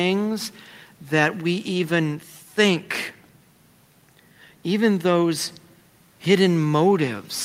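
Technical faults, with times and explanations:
No technical faults can be heard in this speech recording.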